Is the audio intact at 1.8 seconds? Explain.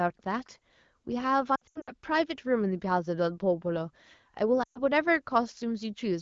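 No. From 1.55 to 1.91 s the sound repeatedly dips, warbles and thins out. About 200 ms is missing in scattered gaps across roughly 320 ms, and the longest continuous loss is about 80 ms. These are lost AMR speech frames. Radio errors corrupted the frames, and the AMR-WB decoder, running at 12.65 kbit/s, filled each gap by reusing the last good pitch and vocal tract settings at falling gain. In wideband that fill fades out quickly, so each gap sounds brief and weak before clean speech returns.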